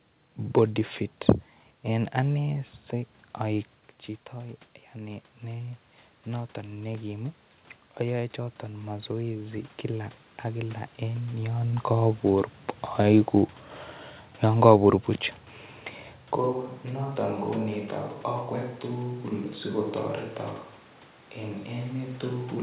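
From 4.94 s to 7.45 s the speech and the room noise behind it swell together, climbing by 4 dB over about two and a half seconds. This is automatic gain rising. Just before, the input level at the microphone fell by 9 dB, as when a talker leans back, and the gain control treated the quieter signal as too weak and raised its gain step by step, lifting the background along with the voice.

At 16.37 s the voice turns suddenly roomy and hollow, thinner in the bass and roughly 10 dB quieter, with room noise sitting only about 25 dB below the speech. It stays that way to the end of the clip. The abrupt change in character points to a switch to a distant microphone: the close microphone's signal likely dropped out, leaving a pickup farther away that hears more of the room. The narrow telephone-band sound, with nothing above 4 kHz, comes from the G.711 call path throughout.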